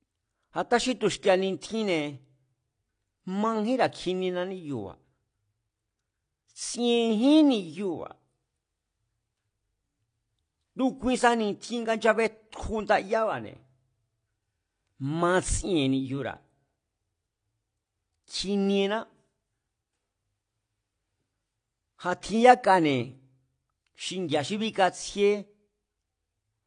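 Throughout the speech, nothing is heard above about 9.8 kHz, and the top end has the dull texture of heavy compression. This is likely low-bitrate audio saved at a high bitrate: a roughly 32 kbit/s AAC encoding re-saved as MP3, which cannot restore what was lost.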